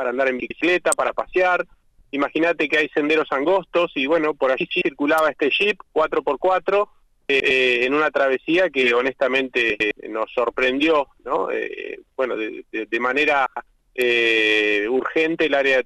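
The audio has six spots where frames are out of order, at 0.40 to 0.61, 1.84 to 2.05, 4.60 to 4.82, 7.29 to 7.51, 9.70 to 9.91 and 13.46 to 13.67 s. Each is a roughly 0.21 s garbled flutter where two neighbouring runs of about 105 ms play back in swapped order, with no time lost. There are also three sharp snaps at 0.92, 5.18 and 14.02 s, sitting on top of the sound, most likely an electrical switching spike from a nearby switch or static discharge getting into the line.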